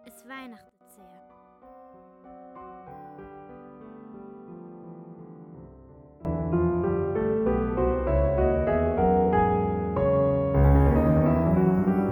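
Two sudden gain jumps stand out. At 0.69 s the level drops by about 18 dB and comes back at 0.81 s, and at 6.25 s it leaps up by about 20 dB and stays there to the end. Each time the sound and its background noise shift together in a single step, with no fade. That likely comes from a gain setting or bit shift applied instantly rather than ramped.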